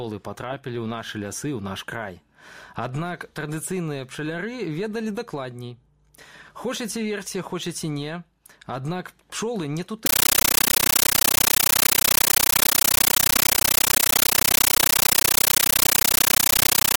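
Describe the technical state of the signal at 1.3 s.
At 1.3 s the signal is intact, with no audible fault at that point.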